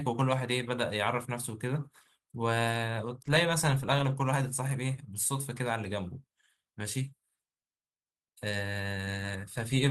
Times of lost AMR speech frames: none

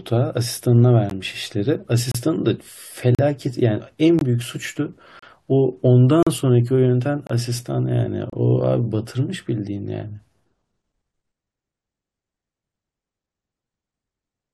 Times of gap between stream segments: 1.10, 2.11-2.15, 3.15-3.19, 4.19-4.21, 5.19-5.22, 6.23-6.27, 7.27-7.30, 8.30-8.33

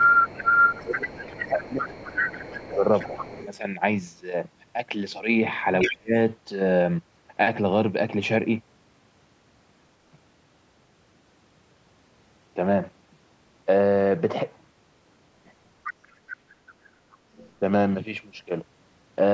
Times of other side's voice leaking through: 0.00-2.66, 2.98-3.49, 5.80-5.92, 15.83-16.74, 17.13-17.51

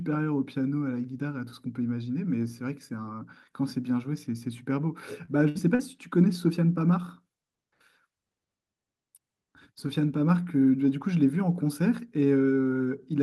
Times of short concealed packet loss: 5.25-5.36, 5.75-5.81

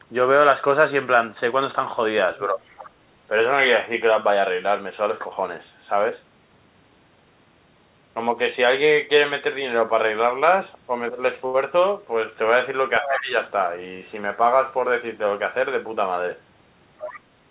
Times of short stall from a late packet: 11.46-11.56

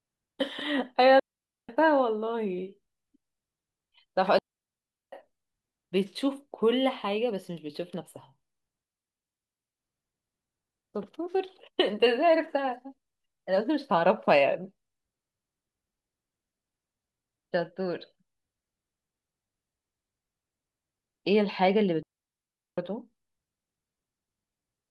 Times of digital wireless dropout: 1.19-1.69, 4.39-5.12, 8.84-9.79, 22.03-22.78

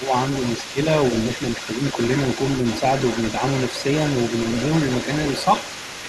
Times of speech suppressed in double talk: 0.00-0.12, 0.73-0.77, 6.03-6.08

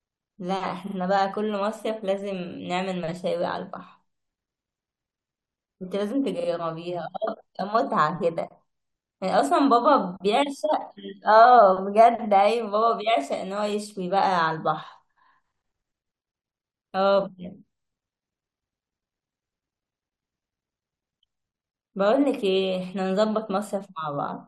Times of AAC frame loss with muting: none

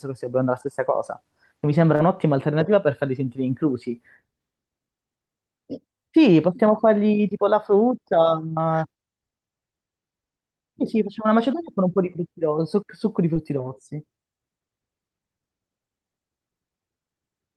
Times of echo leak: none

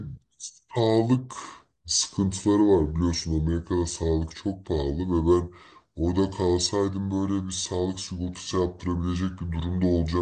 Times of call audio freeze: none

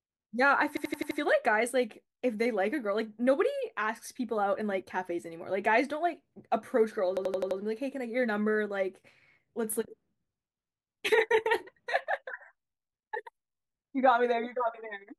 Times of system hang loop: 0.77-1.19, 7.17-7.59

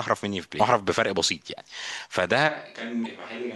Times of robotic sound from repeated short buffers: none

